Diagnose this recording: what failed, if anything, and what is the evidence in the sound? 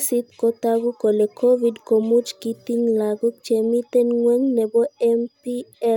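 Nothing failed; no faults heard.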